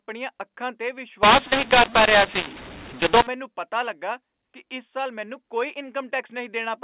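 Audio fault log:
1.23–3.27 s, mu-law and A-law mixed up: after "ਅੱਖਾਂ 'ਤੇ" the speech turns harsh and gritty until "ਪਤਾ ਲੱਗਾ ਕਿ ਇਸ", and the gaps between syllables fill with hiss. The A-law telephone bytes in this stretch were decoded with the mu-law curve, which maps each code to the wrong amplitude. Some levels are inflated, others shrunk, and near-silent samples jump well above zero. Outside this span the A-law coding at 8 kHz gives clean band-limited telephone speech.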